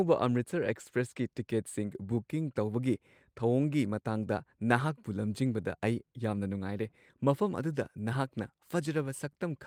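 No technical faults are audible anywhere in this speech recording.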